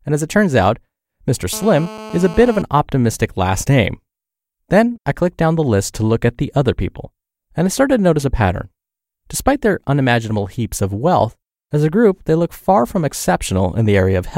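From 1.53 s to 2.62 s, just before "optimistic last name", a GSM phone buzz sits under the speech: a hard, raspy tone at about 217 Hz, repeating at 216.7 Hz, packed with harmonics and about 15 dB below the speech. A nearby 2G handset in a call was sending radio bursts that the audio circuitry rectified into sound. Unlike mains hum, which is smooth and sits at 50 or 60 Hz, this buzz is gritty, pulsed and unrelated to the speech.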